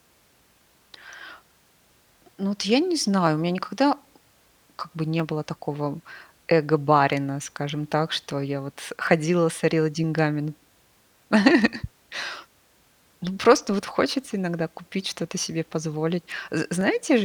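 From 0.37 to 16.81 s, clicks recur every 0.967 s, likely clock drift buffer slips; their strict regularity distinguishes them from random dropouts.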